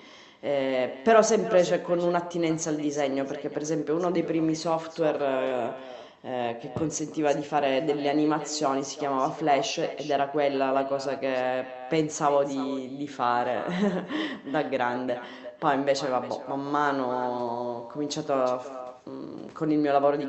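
Echo with no canceller runs throughout the speech: the far end's loudspeaker feeds back into its microphone uncancelled, so every phrase returns around 400 ms later as a thinner copy, about 14 dB below the direct sound.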